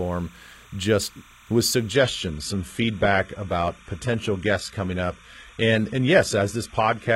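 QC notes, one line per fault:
throughout, timecode bleed: a steady chirping warble sits roughly 30 dB under the speech. It is linear timecode at 30 frames per second leaking in, switching between tones near 1 kHz and 2 kHz. A spectrogram shows thin flickering horizontal bands at those two frequencies.
1.93–7.15 s, adaptive stream at a lower bitrate: right after "just with" the quality drops suddenly with no gap. The treble turns synthetic and artefacts rise, which fits a switch from about 96 kbit/s AAC-LC to a 16 kbit/s HE-AAC rendition. On a spectrogram, the upper band becomes a blurred, copied-looking texture above a lower cutoff.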